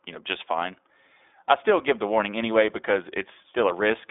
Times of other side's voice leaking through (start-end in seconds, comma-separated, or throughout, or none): none